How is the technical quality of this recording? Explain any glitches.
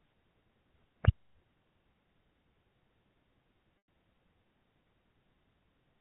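There is one glitch, a dropout handled by concealment, heard over telephone-band G.711 coding that cuts everything above 4 kHz.

Packet loss with pitch repetition, 3.80 to 3.87 s: about 100 ms of audio, likely five 20 ms packets, never arrived. The receiver filled the gap by looping the last pitch cycle and fading it, so the speech fades into a brief silence and then returns with a short cross-fade.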